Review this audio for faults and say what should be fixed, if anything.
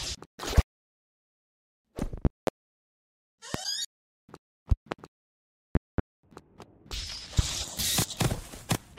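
Loud pops: sharp, roughly 25 dB spikes over the continuing sound, single at 0.58–0.61, 3.54–3.57 and 7.39–7.42 s, and as quick double pops at 2.25–2.50, 4.72–4.95 and 5.75–6.01 s. They are likely voltage steps from a faulty plug, switch, static or driver glitch. Secure connectors, avoid switching during recording, and update audio drivers.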